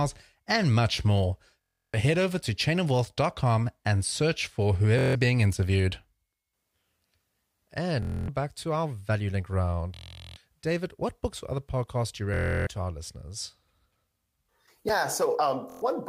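Bluetooth stutter hits this speech at 1.64 s after "and much more", 4.99 s after "and search for", 8.03 s, 9.94 s, 12.34 s after "other podcasts do you", and 15.70 s. Late or lost wireless packets make the receiver replay a tiny slice as a buzzing stutter. Then the audio jumps ahead, skipping 0.1 to 0.4 s.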